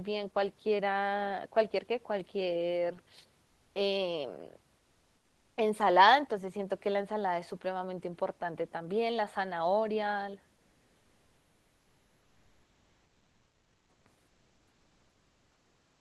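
From 14.27 s to the end, comfort noise replaces the background, likely from discontinuous transmission. The room noise becomes steady, featureless hiss about 2 dB quieter, never silence as a dropout would be.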